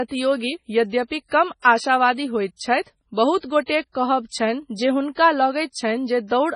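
Speech runs through the whole clip with the marks of MP3 compression, likely from a heavily starved encoder; the damage fits a low bitrate near 24 kbps. Nothing survives above 10.5 kHz, and weak frequency lines blink on and off between frames, giving a watery, swirling texture with chirpy sibilants and smeared consonant attacks. That flickering separates it from a plain low-pass filter, which would dull the treble but leave the remaining sound steady.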